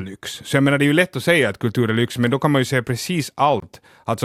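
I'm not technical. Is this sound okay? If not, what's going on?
No. At 3.60 to 3.62 s there is a gap at a join of encoded pieces: the speech drops out for about 24 milliseconds. It was saved in separate chunks, each with a bit of silent padding at its ends, and they were stitched together untrimmed, leaving a tiny hole.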